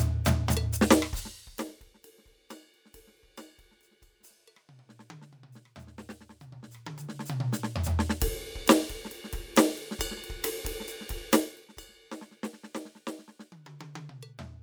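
A music clip with a rapid ticking, zipper noise, riding on the sound from 6.24 to 7.56 s as the level changes by around 25 dB in 1 dB steps, about thirty a second, each unsmoothed jump clicking.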